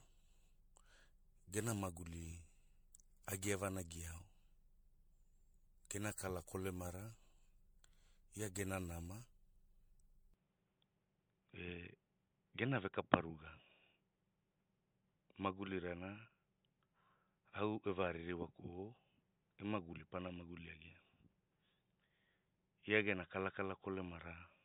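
A speech recording carrying generation loss throughout: swirly, hollow smearing and blurred attacks well beyond what a single 96 kbit/s MP3 pass would cause, likely from roughly ten successive re-encodes. At 10.34 s the input switched to a poorer device: the band abruptly stops near 3.8 kHz to the end, with no gap or level jump, and a new noise floor about 50 dB down, likely another microphone or a headset call profile rather than plain filtering.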